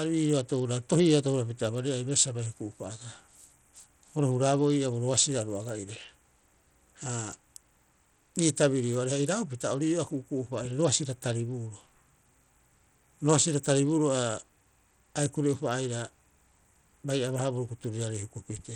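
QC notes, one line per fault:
throughout, Bluetooth SBC compression: the speech carries plainly audible codec damage of the kind a low-rate SBC link leaves, which fits a stream around 80 kbps. At that rate the encoder's bit allocation starves the weaker upper sub-bands and coarsely quantises the rest, likely because the Bluetooth connection fell back to a small bit pool. The result is treble that drops out and flickers, with a gritty noise and aliasing riding on the voice.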